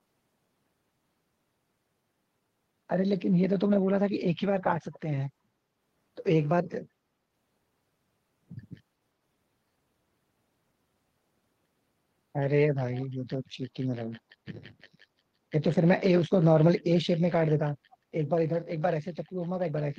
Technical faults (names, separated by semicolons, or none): echo leak